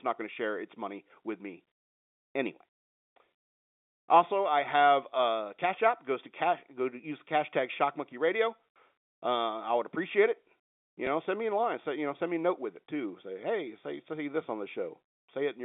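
Packet loss with last packet repeated at 11.06 s: about 10 ms of speech, likely one packet, was replaced by a repeat of the previous one, leaving a small blip.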